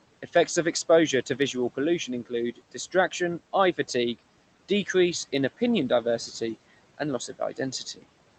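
The noise suppressor in the call path mistook parts of this speech recording for noise and turned them down with the room background. This is speech cut by the noise suppressor, from 2.55 to 2.94 s, just before "eye fatigue decreases in", by up to about 15 dB, and from 7.19 to 7.73 s, right after "in opinion diversity and", by up to about 12 dB. Each time roughly a tenth of a second of speech sounds swallowed or faint.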